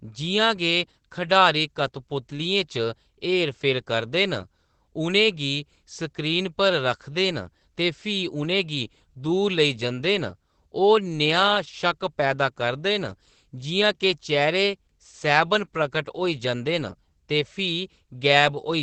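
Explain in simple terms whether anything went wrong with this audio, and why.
Opus voice compression affects the whole speech clip: sound above 8 kHz is dropped and the rest is coded coarsely, leaving speech muffled and hoarse.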